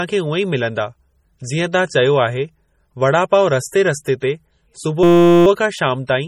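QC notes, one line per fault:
Throughout: MP3 compression, heavy damage consistent with a low bitrate around 32 kbps; likely treble cut and weak frequency lines flickering between frames give watery, swirly speech.
4.2 s and 6.07 s: pre-echo, about 17 and 19 ms of hiss ahead of sharp attacks, quantisation noise spread backwards across the transform block.
5.03 to 5.46 s: system hang loop, a 5.8 ms chunk repeated 74 times, a steady 172 Hz buzz, which fits a 256-sample buffer cycling while the system froze.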